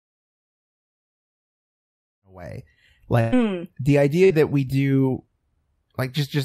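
At 3.21 to 3.34 s, just after "in a way", the last sound is held and fades for about 115 ms. Speech then resumes with roughly 120 ms gone. At 4.24 to 4.32 s, just before "we do", a shorter stretched tail of about 57 ms skips roughly 60 ms. Both are bursts of packet loss: consecutive packets failed to arrive, so the receiver extended and faded the preceding audio to cover the gaps.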